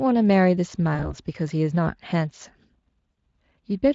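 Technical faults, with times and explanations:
0.95–1.15 s and 3.12–3.15 s, VoIP packet loss concealed by the speech codec: About 40 ms of audio goes missing each time, which fits two lost 20 ms frames. The decoder extends its last pitch and filter at falling gain. The gap turns into a brief buzzy or noisy, fading smear, and the sound stays weak for a moment as the decoder recovers.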